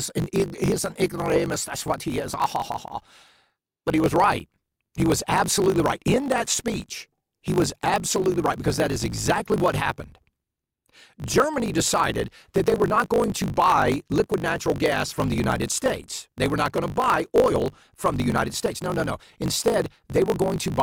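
Throughout, a block size mismatch drops each block's tail, causing a 50 Hz buzz and speech 1.16 times fast with its timbre unchanged, fitting 1024-sample writes.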